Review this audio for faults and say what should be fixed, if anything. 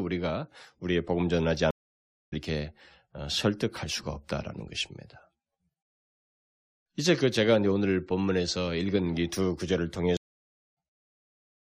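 Stream reconnect at 1.71–2.34 s and 10.17–10.77 s: about 0.6 s of silence, then the sound jumps roughly half a second ahead, unlike a dropout, which resumes in place. A larger client buffer and resuming from the last received position would prevent it.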